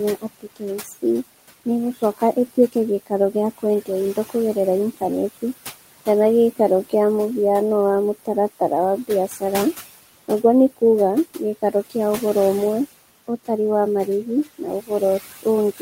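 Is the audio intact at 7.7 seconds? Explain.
No. Noise suppressor artifacts run through the whole clip: steady room noise is pulled down about 16 dB band by band, so the noise sinks between the words and rises under them, unlike a gate's abrupt full cut.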